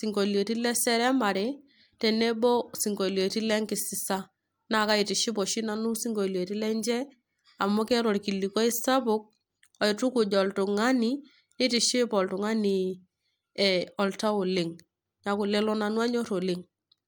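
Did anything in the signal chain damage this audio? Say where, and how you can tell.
No, no signal-chain damage found.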